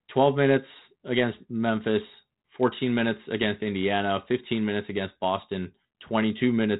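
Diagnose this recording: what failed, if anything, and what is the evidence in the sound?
Nothing failed; no fault can be heard anywhere here.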